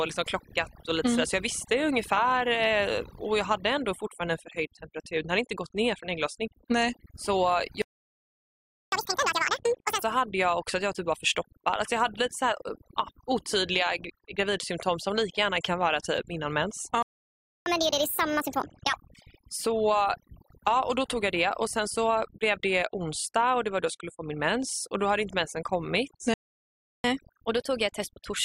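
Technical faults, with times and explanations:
Throughout: overdone noise removal. Aggressive band-by-band suppression leaves near-silent gaps with twinkling specks; the spectrogram shows patchy, speckled holes between harmonics.
7.82–8.92 s, 17.03–17.66 s and 26.34–27.04 s (after "hade inte mensen kommit"): playback stall. Audio cuts out mid-flow for 1.1 s, 0.64 s and 0.70 s, likely from the player running short of data; the waveform shows flat gaps.
8.92–10.03 s (starting on "hade jag också att"), 17.66–18.93 s and 27.04–28.45 s: catch-up at higher speed. Resampled backlog plays at 2×, 1.5× and 1.1×, raising pitch by about ten, seven and one and a half semitones. On the spectrogram, harmonics shift upward and spread apart.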